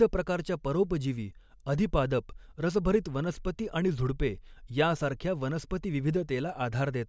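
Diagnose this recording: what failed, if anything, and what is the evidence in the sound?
Nothing failed in this recording.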